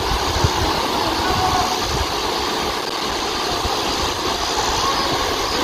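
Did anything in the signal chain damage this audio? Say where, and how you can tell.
Yes: processor overload crackle at the driver/buffer stage, 2.82 to 3.12 s. About ten buffers of around 5 ms missed their deadlines, leaving hard-edged silent gaps heard as gritty crackle.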